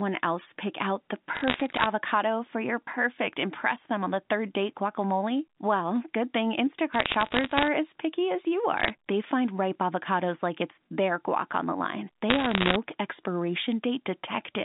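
Bit errors on a digital phone line crackle through the sound at 1.35–1.86 s, 6.93–7.68 s, 8.78–8.9 s and, densest, 12.3–12.76 s. Flipped bits in the A-law samples throw single samples wild, showing as isolated waveform spikes and thin full-height vertical spectrogram lines within the 4 kHz telephone band.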